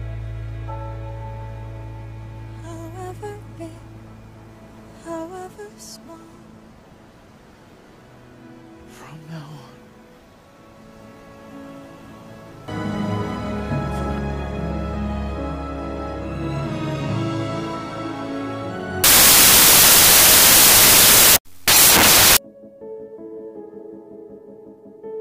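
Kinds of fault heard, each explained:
Wrong sample width, 19.04 to 22.37 s: audio written as 16-bit integers is read back as packed 24-bit integers, so each value is built from three bytes that straddle two real samples. Only some of these mismatched values keep the true signal's top bits. The result is loud noise with the original sound buried underneath, running 1.5 times too fast and raised in pitch by the same ratio.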